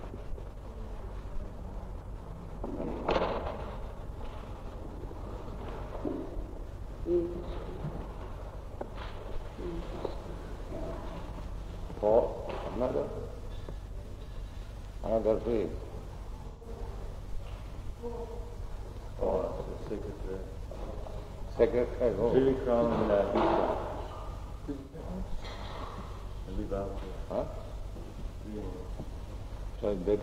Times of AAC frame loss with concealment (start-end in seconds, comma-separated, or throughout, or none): 8.24-8.29, 16.48-16.67, 24.80-25.00